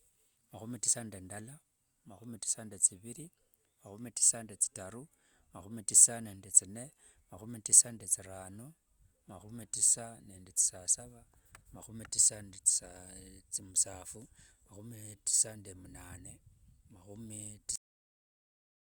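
At 17.76 s the speech is cut off mid-sound. This is a cut-off end. The final stretch of audio never reached the output, so the recording simply stops where the last written buffer ended. Nothing fades or decays. The sound drops straight to digital silence, and that silence fills the remaining 1.2 s or so of the clip. The syllable in progress is chopped short rather than finished.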